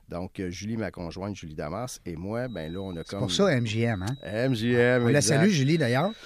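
From about 2.42 s to the end of the speech there's a feedback whistle: a thin, steady tone near 3.9 kHz, roughly 25 dB under the voice, swelling and fading slowly in level. Likely the speaker-to-mic loop is hovering right at the edge of feedback without tipping over.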